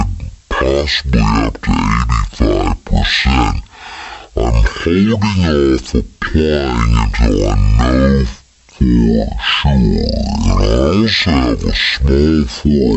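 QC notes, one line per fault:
Throughout: wrong sample rate. The audio is being clocked out at half the speed it was captured, with no rate conversion in between, which fits material recorded at 48 kHz being played back at 24 kHz. Every sample is held twice as long, so the speech runs at 0.5 times normal speed and drops a full octave, 12 semitones, in pitch. Voices come across as slow, drawn-out and unnaturally deep, with timing and pitch shifted together.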